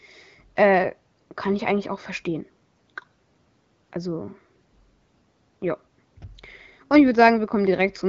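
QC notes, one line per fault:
The speech comes through an AMR wideband (HD Voice) path with a top end stopping near 7.6 kHz and clear, steady detail that fits the 12.65 kbit/s mode or above, with nothing in the signal calling for a note.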